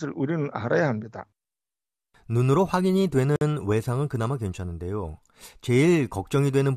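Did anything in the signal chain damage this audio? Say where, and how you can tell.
Yes. A gap at a join of encoded pieces opens at 3.36 s and lasts 52 ms, to 3.41 s, cutting into continuous speech with edges smeared by the codec, after which the speech resumes exactly where it stopped. This is a codec-stage fault: the speech was encoded in separate pieces and joined without trimming, so the encoder's start-up delay and the padding in the last frame were left in as a short stretch of silence.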